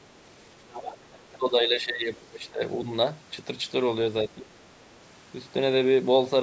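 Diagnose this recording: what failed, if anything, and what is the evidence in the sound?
Other side's voice leaking through at 0.7–1.38 s and 2.32–2.4 s, about 15 and 20 dB below the speech. This is call processing. The echo canceller likely missed loudspeaker pickup.

Speech suppressed in double talk at 1.38–2.25 s, 2.52–2.61 s and 4.28–4.53 s. The talker dips about 10 to 15 dB. This is likely the echo canceller turning down both sides at once.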